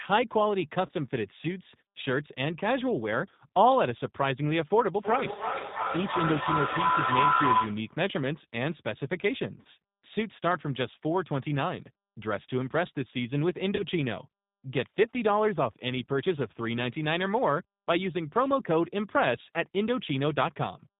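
Throughout, the speech passes through the G.729 codec at 8 kbit/s, which rebuilds each 10 ms frame from a vocal tract model, a pitch predictor and a few pulses. The result is clearly rough and synthetic, with nothing above 4 kHz.

At 0.86 to 0.91 s, VoIP packet loss concealed by the speech codec leaves a gap of about 30 ms, which fits one lost packet. The decoder stretches its last pitch and filter into a brief smear, buzzy or noise-like, and the voice stays weak just after it.

From 4.95 to 8.04 s, a feedback howl builds as a microphone and loudspeaker on the same call loop the sound back with rising gain. It narrows to a tone around 1 kHz, with a loop delay of roughly a third of a second, and peaks about 4 dB above the speech.

The same concealed packet loss returns at 9.62 to 9.66 s and at 13.76 to 13.84 s. Each is another gap of about 30 ms that the decoder fills with a fading extension of the previous sound before the speech recovers.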